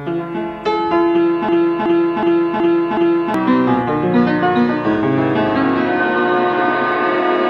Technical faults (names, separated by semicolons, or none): system hang loop